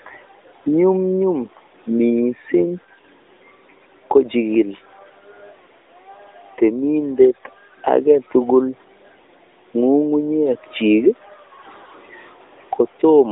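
Speech passed through an AMR narrowband mobile codec for its full length, at a mode that fits about 10.2 kbps on a 300 Hz to 3.7 kHz line: nothing above 3.7 kHz survives, and plainly audible buzzy, synthetic coding damage colours the voice throughout.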